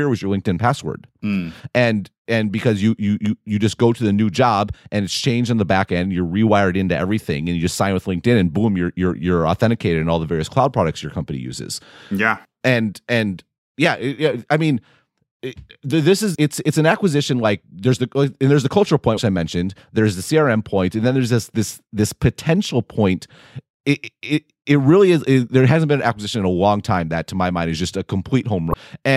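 Damaged data in a compressed stream shows up three times in this speech: at 16.32 to 16.37 s, between "it this" and "it's it's an acquisition"; at 19.14 to 19.19 s, between "and there's the cultural" and "I mentioned there's the"; and at 28.70 to 28.75 s. Each lasts about 55 to 60 ms. Corrupted bytes in the encoded stream make the decoder misread or drop frames and lose sync until it locks onto the next valid frame header, which is heard as a brief chirp, squawk, click or short hole.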